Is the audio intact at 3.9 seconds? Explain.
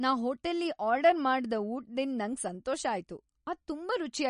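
No. At 3.9 s, as throughout, the treble stops flat near 10.6 kHz on a spectrogram, with weak detail flickering frame to frame, likely MP3 compression at a low bitrate.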